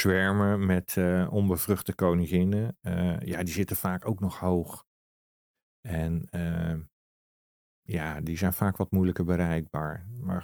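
No technical faults occur at any point in the recording.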